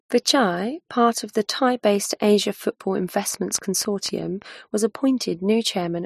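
It's a speech clip with a train of clicks from 3.34 to 4.43 s: around ten similar pops at roughly 7.4 per second, unevenly spaced, sitting about 5 dB above the speech. That's likely interference or a flaky connection or power supply.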